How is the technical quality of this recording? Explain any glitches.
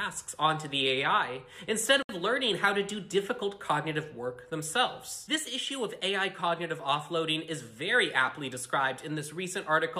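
The recording has one audible glitch, a gap at a join of encoded pieces. From 2.03 to 2.09 s, a silence of about 66 ms cuts into continuous sound. Its edges are smeared by the codec, and afterwards the audio resumes exactly where it stopped. The pieces were encoded separately and joined without trimming, so one run's padded last frame and the next run's start-up delay both remain.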